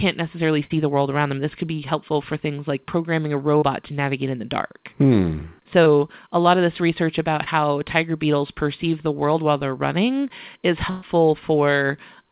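At 0.64 s a burst of packet loss drops about 60 ms; the receiver stretches the last sound into a fading buzz or hiss, then jumps ahead. Short concealed packet loss gives briefer smears or wobbles: 3.58 s between "things like programming a" and "to navigate in the", 5.84 s before "a lot of this", and 7.44 s between "of this research about" and "tiger beetles perceive the". These are 20 to 40 ms. A second burst at 10.90 to 11.04 s loses about 120 ms, filled by a longer held, fading tail. The narrowband call path cuts everything above 4 kHz.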